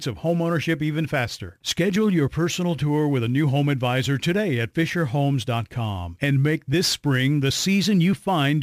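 Sample clock jitter runs throughout the speech. The converter's timing wanders by around 7 microseconds, so each sample lands slightly off its proper instant. Steep, loud and bright passages pick up a gritty hiss roughly 25 dB below the signal, gone in pauses.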